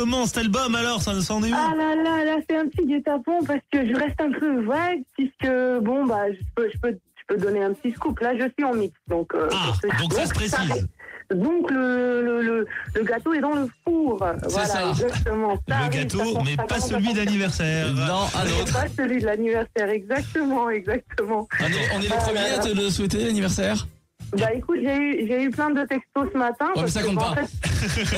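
From 11.31 to 11.80 s a jitter buffer speed-up runs the audio at about 108% speed as the receiver trims a backlog, cutting out around 40 ms in small pitch-period slices. It sounds briefly hurried, but pitch holds steady, unlike a resampling speed-up.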